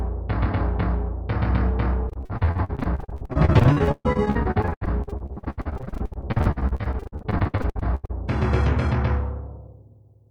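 Repeated packet loss (robotic sound) runs from 2.09 s to 8.11 s. Over those six seconds the stream keeps losing chunks of audio, dozens of short holes, the longest about 132 ms. Each hole is papered over by stretching the sound that came just before it, so about 41% of the stretch is this patched-in material. The result is choppy, stuttering sound with pieces missing.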